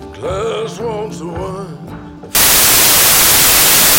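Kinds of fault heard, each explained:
Samples built from the wrong bytes: from 2.35 s to the end, each sample's bytes are assembled in the wrong order or offset by one, so the rapidly changing low-order bits dominate the value and the sound turns into loud, harsh broadband noise, close to white on loud sounds.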